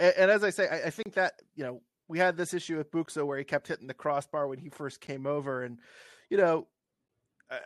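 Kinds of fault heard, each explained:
Gap at a join of encoded pieces: the speech breaks into short silences at a steady 2.0 s spacing, which points to separately encoded pieces spliced without trimming the encoder's start delay and end padding. The first gap runs 1.03 to 1.06 s (31.4 ms); the others, 11.4 ms each, fall at 3.06, 5.07 and 7.08 s. A waveform shows flat-line dropouts with smeared edges, and a spectrogram shows thin vertical blank stripes before the sound resumes where it stopped.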